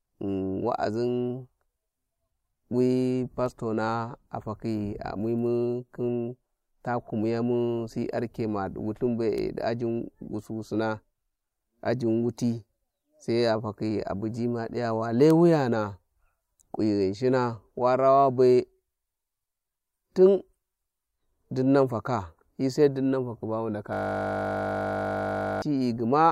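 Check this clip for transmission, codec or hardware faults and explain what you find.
One hardware fault is present near the end of the speech. A system hang loop runs from 23.93 to 25.62 s. The machine froze while the audio hardware kept replaying one 20 ms buffer, producing a steady 50 Hz buzz.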